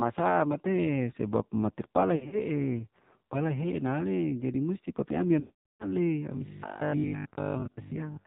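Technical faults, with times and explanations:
Throughout: AMR narrowband mobile codec, heavily degraded speech at a low rate consistent with 5.9 kbps AMR-NB. Nothing above 4 kHz survives, and the sparse pulse excitation of the vocal tract model leaves the voice buzzy, thin and synthetic.
2.16 to 2.41 s: lost AMR speech frames, 120 ms of frames missing, scattered over 160 ms with the longest gap 60 ms. The decoder repeats the last good pitch and filter settings at falling gain, giving brief dips and warbles.
5.40 to 5.85 s: lost AMR speech frames, 400 ms of frames missing. Concealment stretches the last sound, fading it to silence within about 0.1 to 0.2 s, and the rest of the gap stays silent until decoding resumes weak and rough.
6.37 to 8.25 s: robotic sound from repeated short buffers. A rigid 50 Hz metallic buzz overlays the speech, which still loosely follows its shape. Most of this stretch is repeated material, likely from a short buffer looped about every 20 ms while real audio is skipped.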